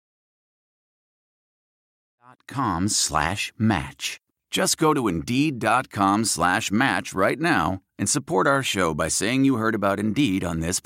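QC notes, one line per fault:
No faults found in this speech recording.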